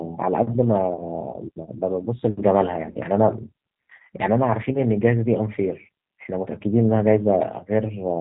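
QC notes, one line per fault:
Throughout: G.729 codec. The speech is rebuilt at 8 kbit/s from a vocal tract filter, pitch predictor and a few pulses per frame, so it sounds plainly rough and synthetic. A spectrogram shows nothing above 4 kHz and smeared, slightly grainy harmonics.
1.31 to 1.36 s and 2.91 to 2.97 s: VoIP packet loss concealed by the speech codec. At each point about 30 ms of audio went missing, which fits one lost packet, and the decoder filled the gap by extending its last pitch and filter while turning the gain down. That gives a short, stretched sound that fades. On the waveform the envelope dips, with weak, distorted onsets as the sound picks up again afterward.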